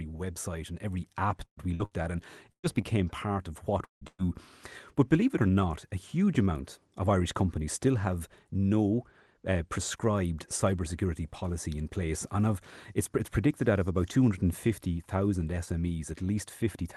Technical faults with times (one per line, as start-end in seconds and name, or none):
1.45-2.07 repeated packet loss (robotic sound)
2.52-2.66 burst of packet loss
3.84-4.04 long network dropout
4.07-4.27 burst of packet loss